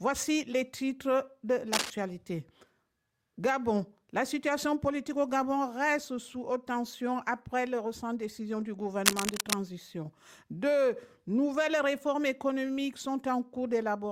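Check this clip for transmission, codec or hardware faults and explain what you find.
There is one hardware fault, cable scratch noise, heard twice: 1.73 to 1.90 s and 9.06 to 9.54 s. Dense, uneven scratching roughly as loud as the sound, likely from a worn connector changing contact resistance, rustles rather than clicking once like a digital dropout.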